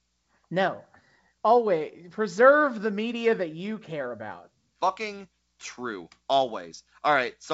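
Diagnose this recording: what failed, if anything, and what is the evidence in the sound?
Nothing failed: the path is G.722 wideband telephone coding, with the band reaching about 7 kHz and the lower band showing none of the added noise of the reduced modes, which points to the full 64 kbit/s rate.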